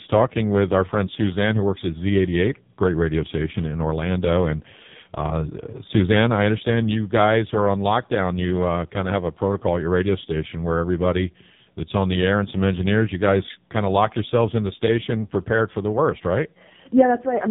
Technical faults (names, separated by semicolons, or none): AMR narrowband mobile codec